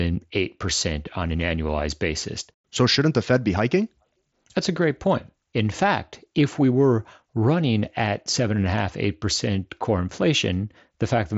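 A speech recording with no technical faults to point to. It comes over a Bluetooth mSBC headset link, so nothing is heard above about 7.7 kHz, and the codec leaves only a light graininess on the louder sounds.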